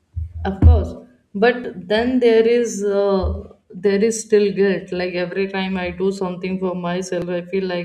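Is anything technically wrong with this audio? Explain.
Yes. At 1.64 s and 7.22 s the speech jumps ahead by roughly 10 ms, likely a dropped buffer (overrun) where samples were overwritten before collection and the gap spliced shut.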